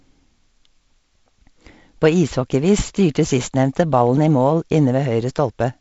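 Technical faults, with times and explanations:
No technical faults detected.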